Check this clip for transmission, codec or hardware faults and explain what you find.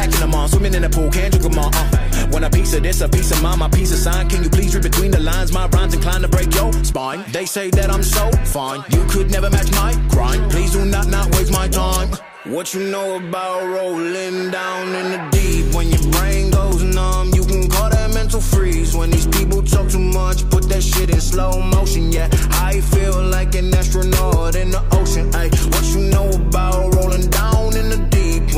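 Five isolated clicks point to one fault, most likely dropped samples. They fall at 9.33, 12.67, 16.72, 21.04 and 25.68 s. At each point a tiny stretch of the stream, well under a millisecond, seems to be missing, so the waveform leaps straight to a later value. That step is heard as a single sharp tick with no gap and no lost sound. It shows as a thin vertical line across the spectrum. A dropout would instead leave an audible hole or a muted stretch.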